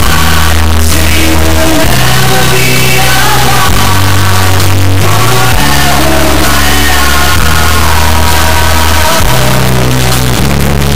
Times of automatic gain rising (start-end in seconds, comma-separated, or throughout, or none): none